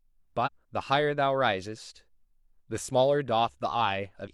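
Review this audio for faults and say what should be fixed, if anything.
Damaged data in the compressed stream produces two short glitches in the speech, at 0.42 to 0.49 s and at 4.23 to 4.28 s. At each point the decoder meets corrupted bytes, misreads or drops the affected frames, and has to resynchronise on the next valid frame header. On a spectrogram each event shows as a brief vertical disturbance. In the waveform there is an abrupt discontinuity rather than a smooth envelope. To prevent this, the stream should be carried over a checksummed, error-protected transport, and the file integrity should be verified before decoding.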